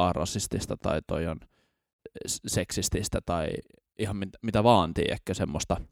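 Nothing goes wrong anywhere in this stretch of speech; there's simply no technical fault to point to.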